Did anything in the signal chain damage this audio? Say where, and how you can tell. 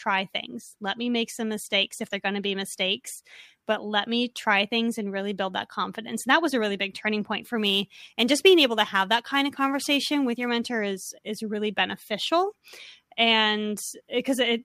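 Yes, the converter: sample clock jitter from 7.57 to 10.49 s, after "big turning point for", adds signal-following roughness, a few microseconds of timing wobble, about 25 dB down.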